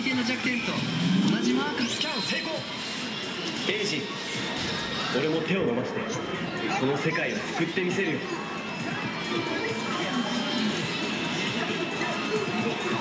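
Nothing is technically wrong with this audio.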